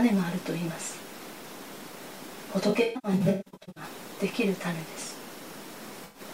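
From 2.69 to 3.84 s, AAC frame loss with concealment breaks up the sound. Gaps totalling about 0.73 s are scattered across that 1.1 s stretch. The longest run is around 150 ms. The decoder patches each gap from the last good spectrum, so the sound turns smeared, noisy and phasey in bursts. A second, shorter loss from 6.04 to 6.21 s, about 107 ms, leaves a brief smeared patch near the end.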